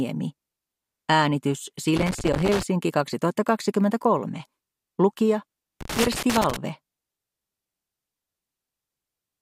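Two bursts of loose connector crackle break up the audio, from 1.96 to 2.63 s and again from 5.81 to 6.56 s. Each is an irregular scratching crackle where a worn or dirty contact repeatedly makes and breaks, chopping the signal.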